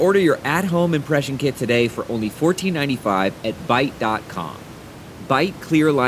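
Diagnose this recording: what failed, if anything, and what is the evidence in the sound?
Nothing stood out on listening to this speech recording, with only the room's own background noise sitting about 21 dB below the talker.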